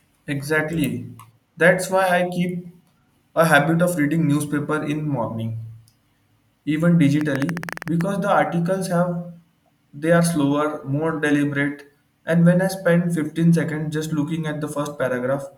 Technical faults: train of clicks

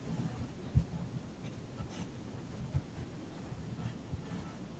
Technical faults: none

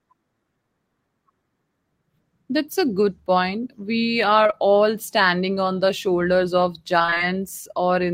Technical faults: short concealed packet loss; repeated packet loss (robotic sound)

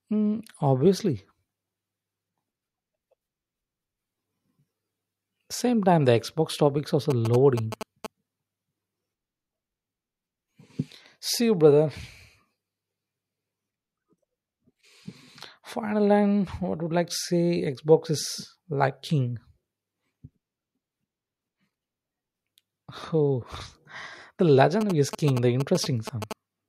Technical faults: GSM signalling bursts

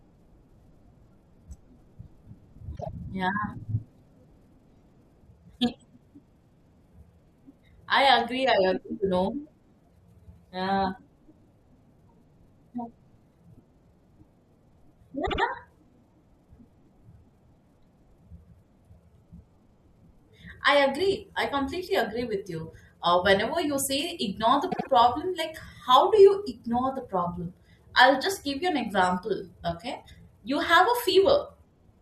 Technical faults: repeated frames

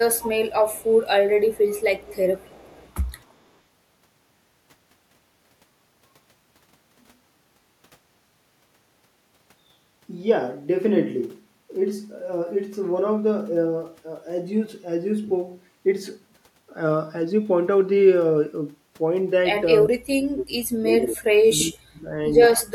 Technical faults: echo leak; speech suppressed in double talk

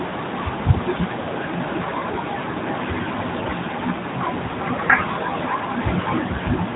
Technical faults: none

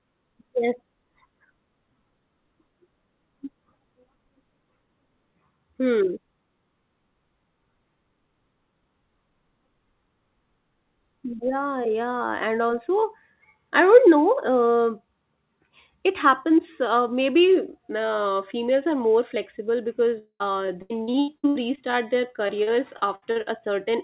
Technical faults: long network dropout; repeated packet loss (robotic sound)

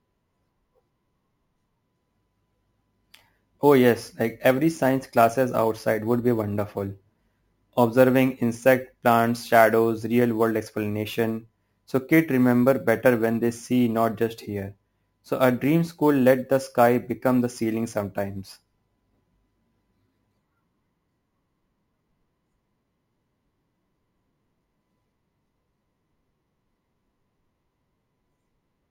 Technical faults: imaging from sample-and-hold upsampling

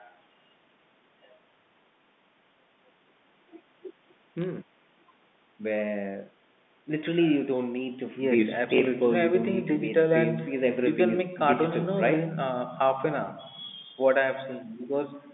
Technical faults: bit errors on a digital phone line

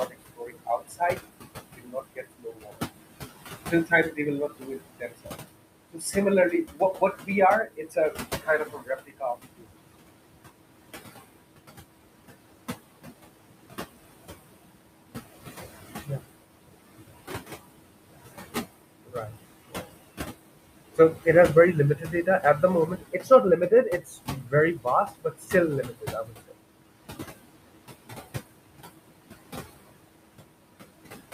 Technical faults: noise suppressor artifacts; speech cut by the noise suppressor

